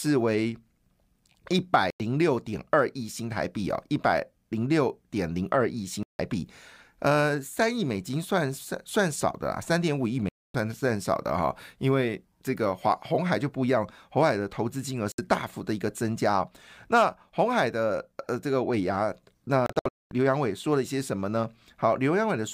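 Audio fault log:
1.90, 6.03, 10.29, 15.12 and 19.66–20.12 s: digital broadcast dropout. The receiver mutes on failed frames, which fits frames of about 32 ms. The speech vanishes for 96, 160, 256 and 64 ms, then in scattered holes, longest 224 ms. These show as flat waveform gaps and blank full-band spectrogram columns.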